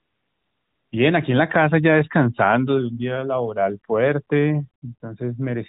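From 0.0 to 0.92 s the background is a smooth, even hiss rather than a real room, and it gives way abruptly when the speech starts. That is AMR comfort noise: the phone treated the opening as silence, stopped sending speech frames, and the receiver synthesised noise from a rough level and spectrum estimate.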